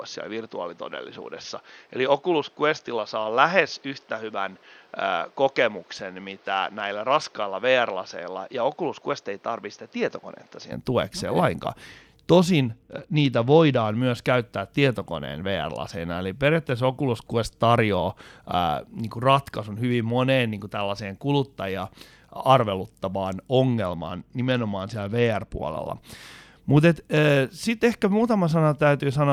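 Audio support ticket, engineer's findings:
Input switched to a poorer device, likely. 0.00–10.72 s: speech boxy and dull, nothing above 6.7 kHz. Level about 5 dB lower. Different noise floor, roughly 35 dB below the signal. Narrow band clears at 10.72 s. No silence at the switch.

Bluetooth SBC bit pool drop at 5.95–7.30 s, 12.73–13.95 s and 23.85–25.74 s. Treble dulls and gritty noise rises. Fits bit pool falling from 28 to 11, about 90 kbps. Top sub-bands starved, the rest coarsely quantised. Each drop recovers.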